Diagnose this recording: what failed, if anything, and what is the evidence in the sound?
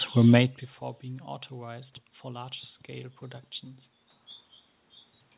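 Nothing in the signal chain has failed: the room's background noise, the level changes around half a second and again near four seconds where the talker shifts relative to the microphone, and the band limit with nothing above 4 kHz, which fits a G.711 mu-law call path at 64 kbps, are all the normal behaviour of the recording and its transmission.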